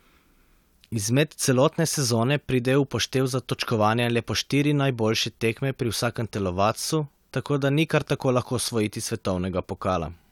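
No technical faults are audible anywhere in this recording.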